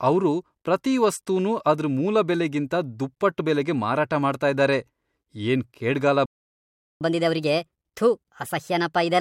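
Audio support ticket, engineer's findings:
Playback stall at 6.26 s, right after "ಏನ್ ಕೇಡ್ಗಾಲ". Speech cuts out mid-flow. Silence lasts 0.75 s, to 7.01 s. Likely cause: the player's buffer ran dry or its output thread was blocked. Either way, nothing reached the output until the player recovered. The speech then resumes.

Catch-up at higher speed from 7.01 s to the end of the clip. Speech runs at 1.25x. Pitch is up by about four semitones. Component: the player's resampler. It plays the backlog from the stall faster to recover the lost 0.75 s. Both speed and pitch rise together, which points to plain resampling rather than time-stretching. No return to normal speed is heard before the clip ends.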